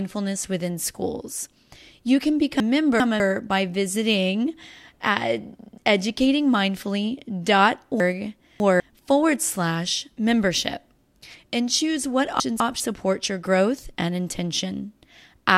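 Speech with chunks out of order at 2.6–3.2 s, 8.0–8.8 s and 12.4–12.8 s. A 200 ms block plays late, by two, three and one chunks. Each spot sounds jumbled, just before "by visiting at", "forward slash membership" and "support your growth and".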